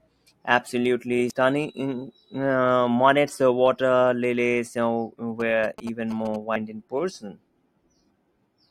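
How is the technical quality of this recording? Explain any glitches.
The speech carries two kinds of glitch. Damaged data in a compressed stream, at 1.3 s and 6.55 s: corrupt bytes make the decoder lose frame sync and resynchronise, giving a brief glitch. GSM signalling bursts, from 5.40 to 6.36 s: a nearby phone's radio bursts, rectified in the audio circuit, make a galloping dit-dit-dit of short 217 Hz buzzes, roughly 15 dB below the speech, pulsed rather than steady like mains hum.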